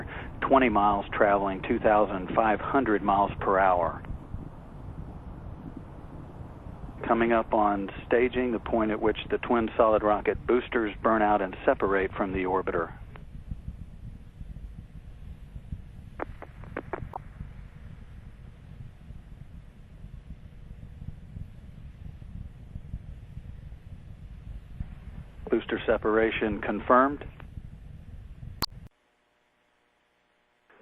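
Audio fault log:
17.13–17.18 s and 28.59–28.72 s, damaged data in a compressed stream: two brief glitches, the second longer at about 0.13 s. Corrupted bytes made the decoder misread frames, lose sync and hunt for the next valid frame header, producing garbled output.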